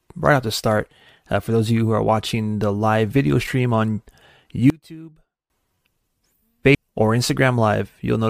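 A speech recording with two separate faults. From 4.7 to 5.5 s the voice nearly disappears and drops by about 24 dB. What remains is a faint copy. This is the one-channel-inverted effect. One stereo channel has its polarity flipped. When the two channels are combined to mono, the centred voice cancels itself out. Only the small differences between the channels survive. The likely cause is a phase reversal in one channel feeding a mono sum. At 6.74 s the sound jumps abruptly forward with a short blip. A chunk of the programme is simply missing. The flow of speech breaks without any pause. This points to a stream segment being skipped. One piece of a segmented stream likely failed to load. The player then moved straight on to the next segment, and the gap appears as a sudden cut.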